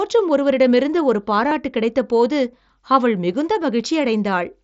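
Concealed Bluetooth headset packet loss from 1.49 to 1.51 s: about 22.5 ms of packets dropped after "ஒருவரிடமிருந்து ஒரு", so the phone repeated recent waveform. That leaves a brief buzzy, held tone before "கிடைத்தபோது அவள் மிகுந்த".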